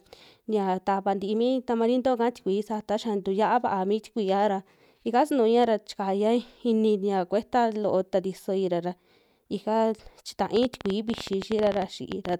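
From 10.57 s to 12.34 s, a train of clicks runs over the speech. About thirty sharp pulses arrive at an average of 14.1 per second, but the spacing is uneven, so the ticking stumbles rather than keeps a steady beat. The clicks share much the same shape and peak around 10 dB above the speech. They sound like rapid popping laid on top of the audio. The likely cause is electrical interference or a faulty connection or power supply.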